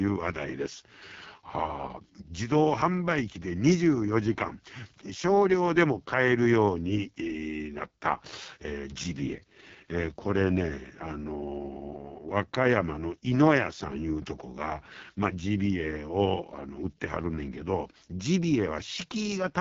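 Throughout, the speech has been squeezed through the AMR wideband (HD Voice) codec at its lowest mode, which fits 6.6 kbit/s, so the vocal-tract model is starved of bits. The speech comes out rough and raspy, the top band is synthetic noise, and nothing sounds above 7.5 kHz.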